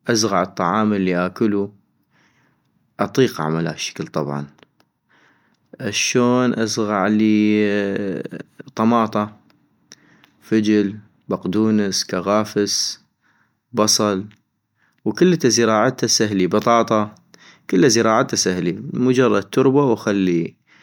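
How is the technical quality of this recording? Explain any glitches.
The technical quality of the recording is sound, with no glitches to explain.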